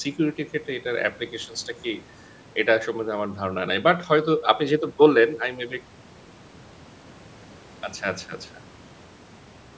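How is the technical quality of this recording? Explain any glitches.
No glitches can be heard in the speech; it has passed through a call's microphone processing, which leaves the lowest bass trimmed and nothing above 8 kHz, as that path normally does.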